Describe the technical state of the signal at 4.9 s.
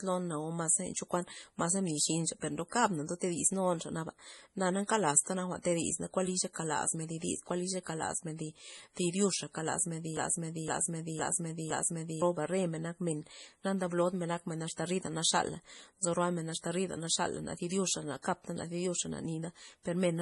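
A short burst of hiss runs from 4.87 to 4.89 s, about 26 ms, just before an attack that sounds soft and smeared. This is pre-echo. The transform codec spread its quantisation noise across the whole block, so noise sized for the loud attack also fills the quiet instant ahead of it.

Around that moment the speech also has a heavily watery, swirly quality, with weak frequency components flickering from frame to frame and nothing above 11.4 kHz. This is MP3 compression damage, and it fits a low bitrate around 32 kbps. The likely cause is an encoder short of bits that zeroes weak spectral lines and cuts the treble at a fixed frequency.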